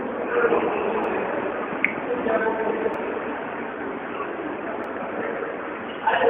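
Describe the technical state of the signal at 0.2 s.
At 0.2 s the signal is intact, with no audible fault at that point.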